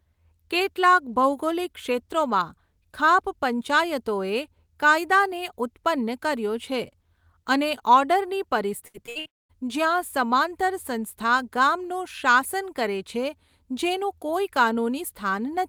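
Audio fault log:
8.87–9.27 s, repeated packet loss (robotic sound): the speech turns choppy as four separate holes open in quick succession, the longest about 65 ms. Each hole is patched by stretching out the sound just before it, so roughly half of this 0.4 s span is synthetic fill covering about 200 ms of lost speech. The repeated stand-ins give the passage its mechanical, robotic character.
9.27–9.51 s, long network dropout: immediately after the choppy stretch, the speech cuts out entirely for about 0.24 s. A brief smear of the last sound carries over the break, then roughly 210 ms of near silence follows before the speech resumes further along, with the missing portion simply gone. This is likely a stall in delivery where no audio arrived and the receiver could only bridge the gap with fading concealment.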